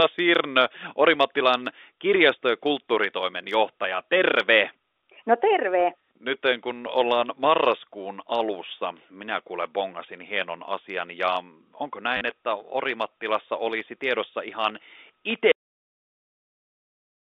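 A small blip at 3.83 s, then a robotic stutter from 12.17 to 12.21 s, mark packet loss with the last packet repeated. Missing audio was filled by replaying the previous packet. The joins rarely match the pitch, and the longer run buzzes at about 100 Hz, which fits 10 ms packets.

At 15.52 s the speech stops dead mid-sound and falls straight to digital silence with no decay. This is a cut-off end: the final buffers were never written or played. The narrow telephone band of the G.711 coding is audible up to that point.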